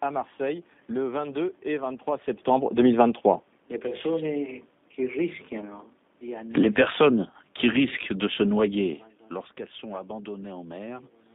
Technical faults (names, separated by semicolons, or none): G.729 codec; automatic gain falling